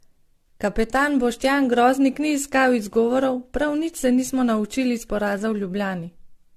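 Throughout the speech there is a swirly, hollow smearing, with consonant attacks blurred. Nothing is audible above 14.2 kHz. This is most likely generation loss: the audio decoded and re-encoded around seven times, each pass requantising on a shifted frame grid, so noise and spectral holes pile up. The character points to repeated AAC-LC passes at about 64 kbit/s, but the damage sounds worse than that rate alone would give.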